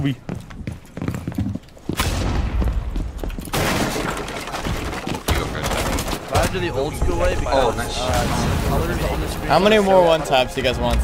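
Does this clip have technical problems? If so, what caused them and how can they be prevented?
Yes. At 3.21 s there is a block of digital silence lasting about 0.67 ms, which fits a 32-sample block being zeroed. The audio drops straight to zero and jumps back with no fade. Because the hole is so short, it is heard as a single tick rather than a gap. On a waveform the trace snaps flat to the centre line for a sliver of time with vertical edges. On a spectrogram it shows as a thin vertical broadband line. It most likely comes from the output buffer not being filled in time. Giving the audio thread higher priority and a larger buffer, and guarding calculations against invalid numbers, would prevent it.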